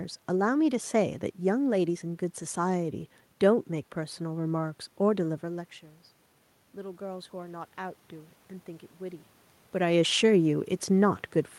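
Automatic gain rising, 6.73 to 8.40 s: after the input dropped about 17 dB, the gain control crept up about 3 dB, swelling voice and room noise together.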